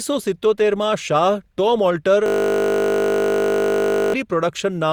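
Across the whole clip, the speech sounds swirly, smeared and hollow, with softened attacks. That points to generation loss, likely from repeated lossy coding, roughly three passes through a codec like Opus at around 64 kbit/s, each requantising on a shifted frame grid.

From 2.26 to 4.14 s, a system hang loop takes over. The system froze while the audio hardware kept replaying one 20 ms slice of its ring buffer. That exact repetition turns the speech into a steady 50 Hz buzz.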